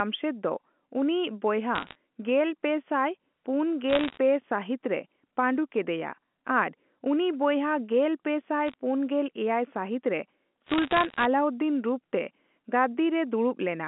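Speech over a G.711 A-law telephone line carries bit errors on a digital phone line: bursts of sharp ticks and crackle at 1.75–1.95 s, 3.90–4.18 s, 8.68–8.74 s (after "ᱩᱱᱤ ᱵᱚᱭᱦᱟ ᱜᱮᱞᱯᱮ ᱥᱟᱭ") and 10.66–11.25 s (after "ᱯᱩᱱᱜᱮᱞ ᱮᱭᱟᱭ ᱥᱟᱹᱦᱤᱛ ᱨᱮ"). Flipped bits corrupt single samples, at rates around one percent or less. The speech between the ticks keeps running unbroken, with no gaps or smeared repeats as packet loss would leave.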